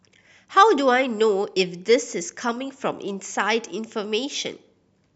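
Nothing goes wrong anywhere in this speech recording; there's no technical fault to point to at any moment.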